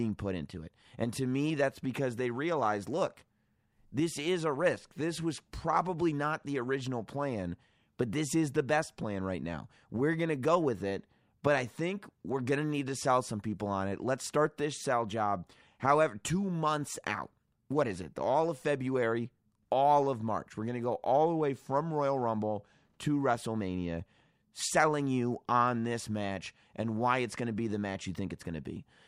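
No technical faults can be heard anywhere in the recording.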